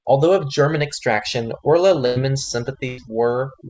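Overdone noise removal runs from start to finish. A noise reduction stage set far too strong pulls individual frequency bands down whenever they come near its noise estimate. The background sinks and breaks up into twinkling specks.

At 2.06 s comes a burst of packet loss. About 0.1 s of audio failed to arrive in time, so the receiver stretched the last sound and let it fade until 2.18 s. It is heard as a held buzz or dying hiss, then the speech resumes with roughly 100 ms skipped.

The same burst of packet loss recurs at 2.88 s, lasting to 3.00 s, with the same faded fill and a further 100 ms dropped. The call codec's band limit, with nothing above 8 kHz, sits beneath both faults.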